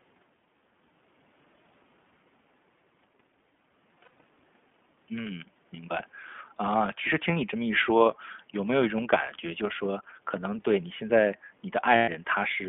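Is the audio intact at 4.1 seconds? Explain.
No. From 4.04 to 4.20 s there are lost iLBC frames: short gaps adding up to about 80 ms, scattered over 160 ms, each no longer than roughly two 20 ms frames. The decoder fills each gap by repeating the last pitch cycle blended with noise, so it sounds like a brief held, slightly buzzy vowel rather than silence. That filled-in quality distinguishes it from a plain dropout, and because iLBC frames decode independently, the speech snaps back cleanly after each gap instead of recovering slowly.

Underneath, the iLBC codec is running. Its 20 ms frames fit the 15.2 kbps mode. It limits the speech to a 150 Hz to 3.4 kHz telephone band and gives it a plainly audible rough, synthetic edge. That edge is steady, unlike the momentary buzz of the concealed frames.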